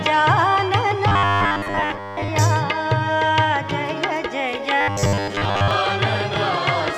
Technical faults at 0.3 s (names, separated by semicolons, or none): none